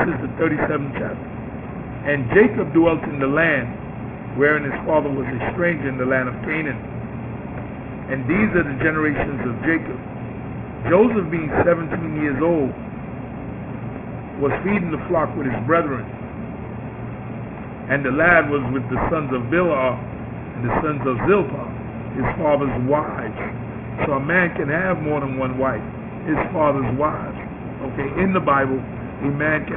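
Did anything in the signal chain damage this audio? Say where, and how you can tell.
Yes. Aliasing runs throughout the clip, introduced at a sample-rate conversion. The band stops hard at 3 kHz, which fits a drop to a 6 kHz rate with no anti-alias filter. Higher content folds back as gritty, unrelated tones, roughly 10 dB below the signal.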